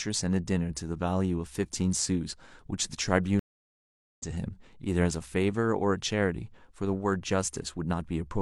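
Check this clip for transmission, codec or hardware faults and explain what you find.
A stream reconnect interrupts the speech from 3.39 s to 4.22 s. The connection dropped, playback went silent for about 0.79 s, and a fresh decoder picked up the stream again, resuming roughly 0.7 s further along, so that stretch of speech is skipped. On a waveform this is a flat gap followed by an abrupt, slightly softened restart. A spectrogram shows a clean vertical blank band across all frequencies, with no tail of decaying sound.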